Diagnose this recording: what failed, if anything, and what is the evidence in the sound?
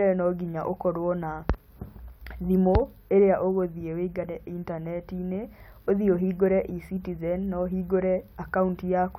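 Nothing in the speech recording points to a failure at any stage of the signal chain: the audio runs continuously, with no audible disruption from wiring, conversion, buffering, processing, transmission, storage or playback.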